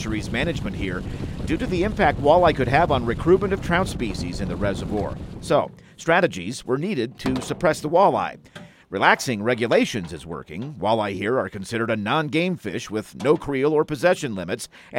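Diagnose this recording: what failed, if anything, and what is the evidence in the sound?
Nothing stood out on listening that points to a failure at any stage of the chain.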